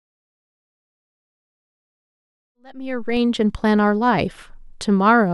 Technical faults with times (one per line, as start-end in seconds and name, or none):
1.03-3.17 DC step